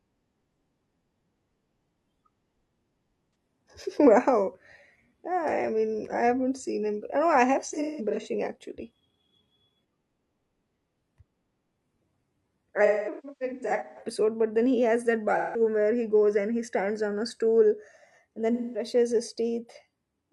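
Speech, marred by AAC frame loss with concealment. Lost frames were patched from the last good spectrum, leaving short smeared, phasey patches at 3.26 s, 7.68–8.27 s after "I have", 12.85–14.02 s before "but then he has", 15.37–15.61 s and 18.52–18.85 s.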